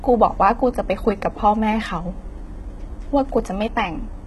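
From start to finish, the treble in this speech has that synthetic sheen you get from HE-AAC compression, most likely at a low bitrate somewhere around 16 kbps given how heavy the damage is. The top end is likely rebuilt by copying lower bands upward rather than coded directly, so the s sounds come out gritty and lispy, with the harmonics not quite lining up. Nothing sits above about 11.8 kHz.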